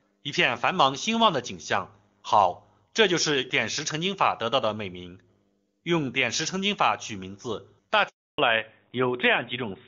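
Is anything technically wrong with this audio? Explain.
Yes. There are two faults, both near the end of this speech clip.

Handover gap, 8.08 to 8.38 s: the call switched networks and no speech frames arrived for 300 ms, so the sound cuts out abruptly and that stretch is lost.

Fallback to narrowband, from 8.38 s onward: the codec drops from the clean HD Voice sound heard earlier to narrowband, removing everything above 4 kHz and leaving the voice duller and rougher.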